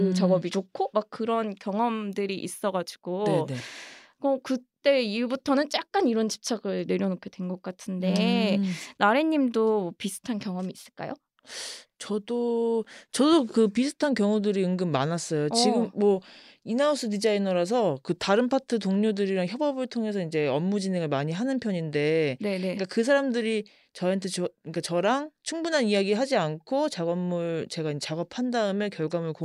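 A speech recording, with nothing technically wrong with it.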